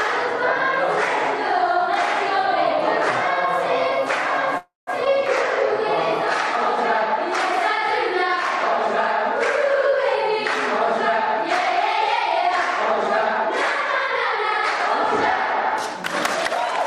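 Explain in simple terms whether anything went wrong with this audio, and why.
A call audio freeze occurs from 4.57 to 4.90 s. The sound stalls for about 0.3 s: the last bit is stretched into a fading buzz or hiss, then about 0.16 s of silence. This is likely because the data packets were held up in transit and the receiving buffer ran empty. Playback then resumes exactly where it stopped, so nothing is lost; a gap is simply inserted.

A skip ahead follows from 5.05 to 5.09 s. Roughly a tenth of a second of sound was dropped, either in transit or by the receiving buffer while later audio was already waiting. Playback jumps forward and joins the two sides almost directly, with barely any gap.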